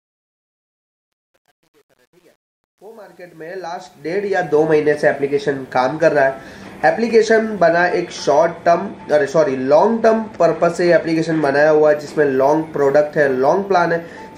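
From 0.0 to 4.63 s the fade-in carries truncation distortion. The gain stage drops low bits without dither, which fits about 9-bit resolution. Until 3.73 s the quiet sound turns gritty.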